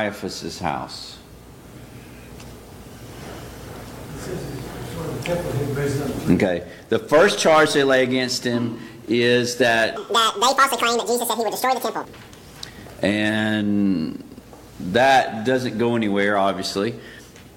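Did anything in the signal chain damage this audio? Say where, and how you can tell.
Yes. The sample-format conversion stage misread the stream from 9.97 s to 12.05 s, so the audio was read two samples at a time at double speed. The reader treated each pair of samples as one frame, as if the data were stereo or had samples twice as wide, and skipped through the material twice as fast. You hear that stretch race at 2x speed and jump a full octave, 12 semitones, higher.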